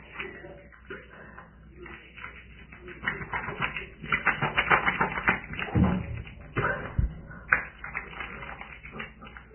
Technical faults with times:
0.00-9.54 Vorbis compression

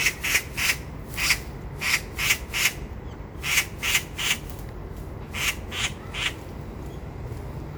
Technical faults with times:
0.00-7.77 generation loss

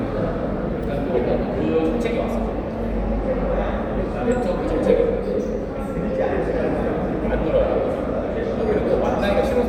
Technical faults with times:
none

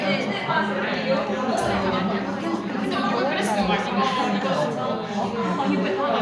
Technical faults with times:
none

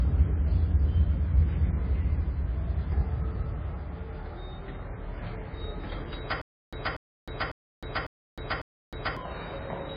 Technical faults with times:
0.00-9.97 MP3 compression
6.41-9.17 stutter with silent gaps

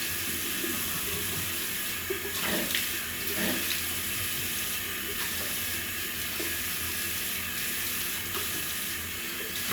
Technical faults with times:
none

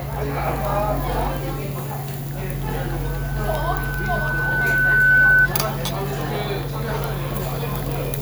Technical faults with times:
3.04-5.48 loudspeaker feedback squeal

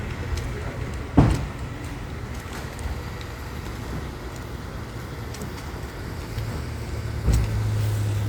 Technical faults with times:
none

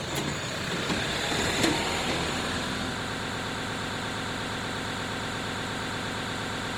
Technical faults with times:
0.00-6.77 Opus compression
3.05-6.77 broken-record loop

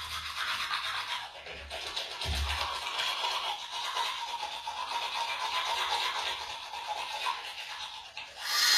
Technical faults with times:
0.00-8.77 HE-AAC compression

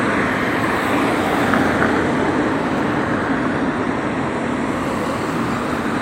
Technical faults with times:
none

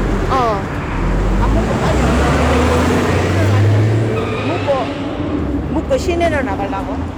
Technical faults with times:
0.00-7.17 hard clipping

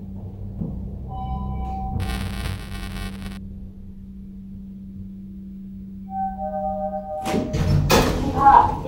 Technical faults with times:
2.00-3.37 buffer tearing

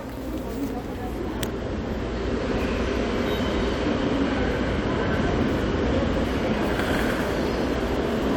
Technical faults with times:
none

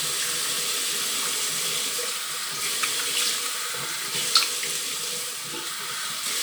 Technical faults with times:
none

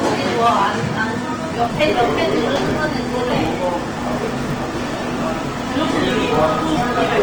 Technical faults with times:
0.00-7.22 hard clipping
0.00-7.22 Opus compression
1.53-7.22 filter restarted on every block

